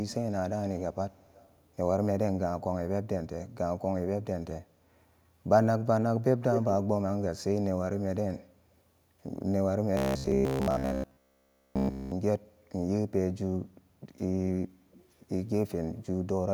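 Echo leak appears from 1.12 to 1.61 s: a faint, delayed copy of the speech trails the original by about 221 ms, sitting roughly 30 dB below it. The likely cause is a far-end speakerphone whose echo canceller let part of what its microphone picked up slip back into the call. It recurs briefly from 14.91 to 15.10 s, this time lagging by about 237 ms at a similarly low level.

Robotic sound from repeated short buffers runs from 9.97 to 12.12 s. The speech collapses into a rigid, metallic buzz pitched at 66.7 Hz while still loosely tracing the speech's contour. That pitch corresponds to a period of 15 ms, which fits fresh audio arriving too seldom and the playback likely looping the last 15 ms over and over. Across this stretch essentially all of the sound is made of those repeats, with the real audio skipped.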